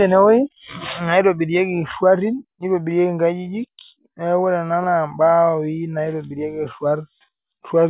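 No technical faults can be heard in this speech recording.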